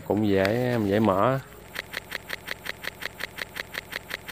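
At 1.80 s a broken-record loop begins. A 180 ms fragment repeats back to back until the end, likely from a stalled player resending its last buffer.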